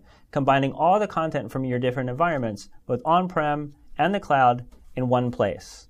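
No technical faults can be heard anywhere here.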